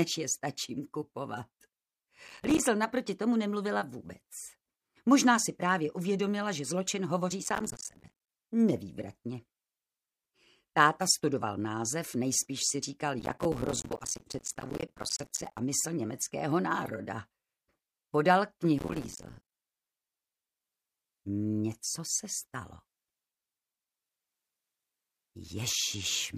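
Processor overload crackle occurs at 2.27–2.60 s, 7.44–8.29 s, 13.20–15.59 s and 18.79–19.52 s. Repeated missed deadlines on buffers of around 5 ms drop short slices to silence, producing gritty, hard-edged crackle that stops once the load clears.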